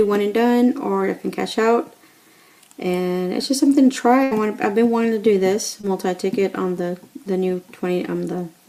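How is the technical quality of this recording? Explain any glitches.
The recording has two packet-loss glitches, one longer and one brief.

From 4.23 to 4.33 s there is a burst of packet loss. Around 80 ms of audio never arrived in time, so the receiver stretched the last sound for roughly 76 ms while fading it. This is heard as a held, dimming tail, and the audio then jumps ahead with that stretch missing.

From 5.81 to 5.85 s there is short concealed packet loss. About 20 ms went missing, and the decoder filled the gap by extending the preceding sound before blending back into the real signal. It comes across as a quick smear or wobble.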